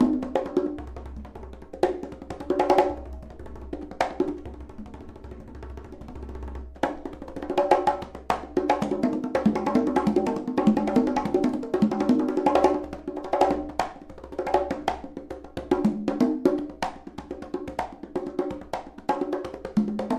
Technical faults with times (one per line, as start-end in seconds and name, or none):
none